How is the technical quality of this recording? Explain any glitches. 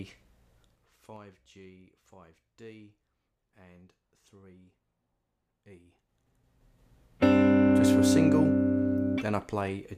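One glitch stands out: zipper noise from 0.6 to 1.21 s, as the level falls by roughly 20 dB in unsmoothed 3 dB steps, about ten a second. Each jump clicks, giving a rhythmic ticking that stops once the level settles, unlike random clicks or crackle.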